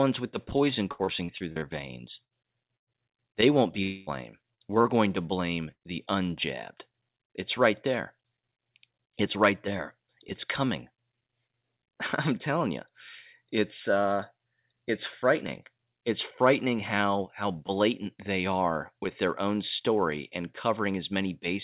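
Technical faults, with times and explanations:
0.92–1.65 s, repeated packet loss (robotic sound): The sound turns choppy here. Six separate holes hit this short stretch, the longest about 63 ms. About 210 ms of real audio is missing in total. The receiver patches each hole by carrying the last sound forward. Then the next hole arrives almost at once. About 30 percent of the span is this synthetic fill, so the result is choppy with pieces cut out.
2.25–2.33 s, 2.78–2.90 s and 5.72–5.83 s, burst of packet loss: Each is a single longer break. About 60 ms is lost in the first, and about 90 ms in each of the others. The last falls between "going to blame" and "the unjabbed". The receiver extends the last sound and lets it fade. A voiced sound becomes a held buzz, and anything else becomes a fading hiss. The audio then resumes further on, with the lost piece simply gone.
3.83–4.10 s, long network dropout: Right after "won't be", roughly a quarter second of audio never arrives, likely because the network stalled. 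About 240 ms is missing. The receiver fills almost all of it by stretching the last sound into a buzz or hiss that decays. There is no stretch of true silence, because the fill covers the whole gap. When the audio returns, it has skipped ahead, and the missing part is not recovered.
4.55–4.60 s and 4.81–4.88 s, short concealed packet loss: Two tiny holes of about 30 ms each. The second sits just before "going to blame the". The decoder bridges each one by continuing the previous sound, using its pitch if voiced or shaped noise if not. It then crossfades back into the real audio. The result is a brief smear or wobble rather than a clear gap. A short consonant in that window can drop out entirely.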